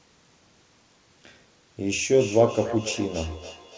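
From 2.11 s to the end, speech returns as feedback echo between two devices. Repeats arrive roughly every 0.3 s, thin and ringing, at about 14 dB below the speech.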